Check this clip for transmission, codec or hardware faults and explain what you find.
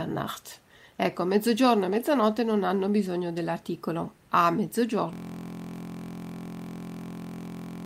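One hardware fault is present: a system hang loop from 5.13 s to the end of the clip. The room noise sits about 36 dB below the speech and belongs to the recording.

From 5.13 s, the driver or machine froze while the sound hardware kept replaying the same ring buffer. A 23.22 ms slice, consistent with a 1024-sample buffer, repeats at 43.1 Hz, heard as a steady buzz. The waveform shows identical tiled cycles, and the spectrogram shows evenly spaced horizontal harmonic lines.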